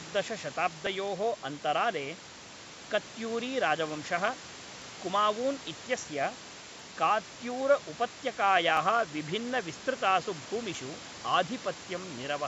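Brief skips with no gap, at 0.87, 2.84, 4.82 (just before "कुमावून् इत्यस्य"), 6.80, 8.77 and 10.75 s, roughly every 2 s. This is audio missing between chunks: about 20 ms is likely lost at each chunk boundary.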